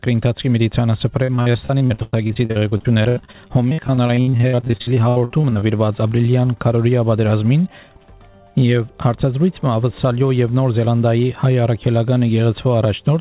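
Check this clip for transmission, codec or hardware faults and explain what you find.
There is one transmission fault: repeated packet loss (robotic sound) from 1.24 to 5.63 s. Dozens of short gaps, the longest about 98 ms, are each bridged by extending the preceding sound, so about a third of the stretch is concealment. The result is choppy with pieces missing. Unlike a single dropout, the holes recur in quick succession. The call path's 4 kHz bandwidth limit is audible throughout.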